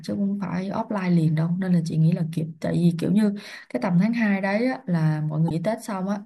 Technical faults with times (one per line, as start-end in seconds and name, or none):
5.46-5.51 damaged data in a compressed stream